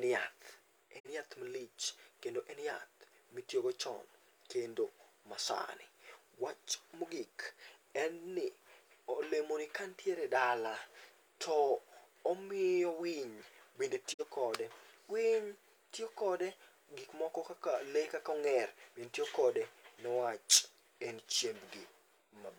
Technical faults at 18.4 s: none

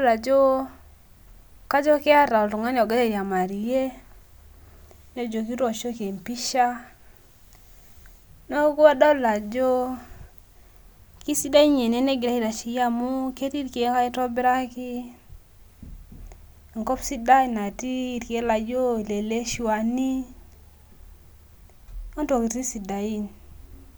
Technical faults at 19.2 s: none

